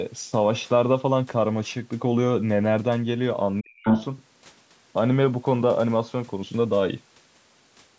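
Speech from a call, and between 3.6 and 3.85 s the talker's voice abruptly drops away, sinking by roughly 40 dB at its deepest so that it almost vanishes for a few tenths of a second. This is speech suppressed in double talk, likely caused by both ends talking at once: the echo canceller could not tell the local voice apart from the loudspeaker echo it was trying to remove, and attenuated everything together. Straight after, from 3.85 to 4.05 s, a second voice pushes through, the other side's voice leaking through at a level a little above the talker's own. The likely cause is residual echo: the far end, played on the talker's loudspeaker and picked up again by the microphone, was not fully cancelled. Across the whole clip the audio carries nothing above 8 kHz, consistent with the call's microphone processing chain.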